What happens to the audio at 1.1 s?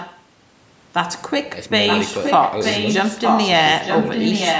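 Nothing goes wrong at 1.1 s; the speech passes through there intact, with only the ordinary shaping of call microphone processing, which trims the deepest bass and leaves nothing above 8 kHz.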